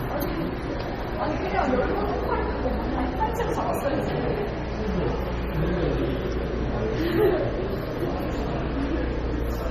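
From start to finish, the sound carries layered lossy-coding damage that likely comes from transcoding between lossy codecs. The smeared, swirly artefacts point to an MP3 around 32 kbit/s re-encoded as Vorbis near that rate. A spectrogram shows a hard ceiling at 13.9 kHz and patchy, holed high bands.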